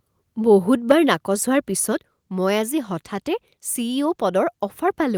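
At 0.90 to 0.92 s there's a brief microphone overload: a harsh, crackly edge on a loud peak, running about 6 dB past full scale, with around a tenth of the samples flattened. The likely cause is input gain set too high, so the converter chops off the waveform tops. Right after, at 0.92 s, the microphone volume steps down and everything drops about 2 dB at once, most likely the call software reacting to that clipped peak and pulling the input level back. It does it again at 1.92 s, a further step of about 3 dB, so the voice and the background both sink abruptly a second time.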